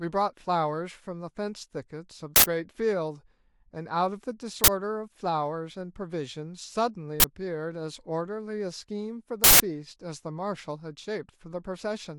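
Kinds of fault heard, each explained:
Uninitialised buffer: sharp, loud bursts of digital noise cut through the speech at 2.36, 4.64, 7.2 and 9.44 s, lasting 40 to 160 ms, because blocks were played before any audio was written to them, so leftover memory came out as samples.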